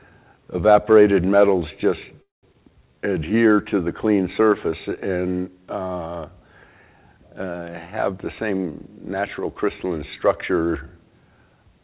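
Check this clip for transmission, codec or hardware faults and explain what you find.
Four transmission faults are present, all from the call's packet path. The audio is band-limited with nothing above 4 kHz, which fits a G.711 A-law narrowband codec at 64 kbps.

From 2.22 to 2.45 s there is a call audio freeze. The sound stops and is filled for about 208 ms, with roughly 170 ms of that silent. The likely cause is delayed packets draining the jitter buffer. Playback then resumes where it left off, so nothing is lost.

At 2.53 to 2.56 s there is a skip ahead. Playback jumps forward with only a short join. Roughly 150 ms of audio is gone. A stretch was dropped while later packets were already waiting, and the two sides were stitched almost directly.

From 2.70 to 3.54 s there is a jitter buffer slow-down. The audio runs at 84% speed with its pitch unchanged. The receiver repeated pitch periods many times to rebuild its reserve, adding 141 ms. 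Sounds in this stretch are drawn out.

From 8.11 to 10.51 s there is a jitter buffer speed-up. The audio runs at 109% speed, again at the same pitch, and sounds hurried. The buffer held more than its target. It trimmed short pitch-period pieces repeatedly, removing about 200 ms in total.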